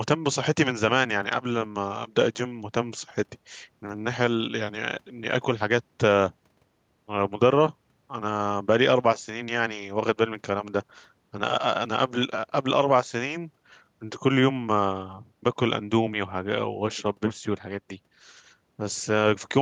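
No technical faults detected.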